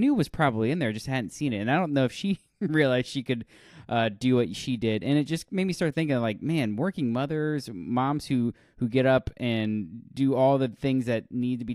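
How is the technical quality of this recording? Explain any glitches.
The recording has one problem, and it runs the whole way through: crude rate conversion. At some point the speech was resampled by a small ratio, and the pattern fits a 48 kHz to 44.1 kHz change done by simple linear interpolation between samples, with no anti-aliasing filter. That shortcut leaves an error that repeats on a cycle set by the two rates, producing shifted, inharmonic copies of the voice. Here it sits roughly 45 dB down, so it's faint: a gritty, inharmonic fizz riding on louder and brighter syllables.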